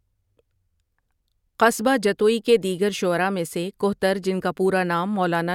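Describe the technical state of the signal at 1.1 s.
Nothing at 1.1 s points to a technical fault; the speech signal is intact at that moment.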